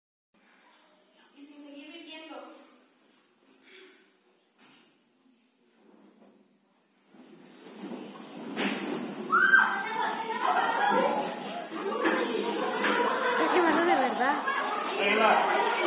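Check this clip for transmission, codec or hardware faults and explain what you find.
No transmission, codec or hardware faults can be heard anywhere in the recording, and the signal comes across intact throughout.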